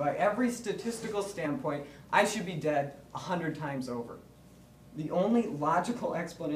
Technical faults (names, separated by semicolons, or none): compressed frames skipped